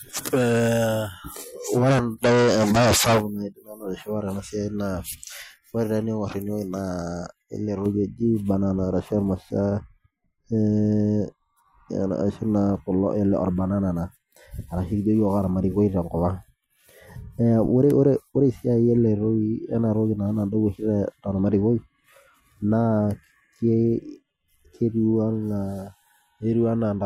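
A speech recording in which, from about 7.86 s to the end, de-emphasis has been applied wrongly: a treble-cut filter meant to reverse pre-emphasis was run on audio that never had any, or ran a second time. The voice turns dull and muffled, with the top end sloping smoothly away to about 11 dB down at 10 kHz relative to 1 kHz. On a spectrogram the upper bands fade gradually from that point, while the waveform looks rounder and less spiky.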